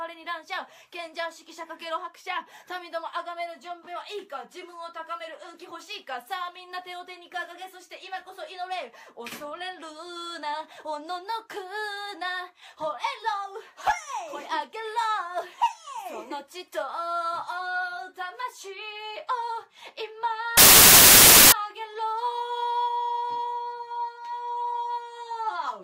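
The audio carries a burst of samples built from the wrong bytes between 20.57 and 21.52 s, a loud hiss lasting just under a second. The reader misassembled each sample's bytes, so the rapidly fluctuating low bits landed in the high-order position and swamped the signal with noise. A spectrogram shows a flat, full-band wash across that span, and the waveform jumps to dense fuzz.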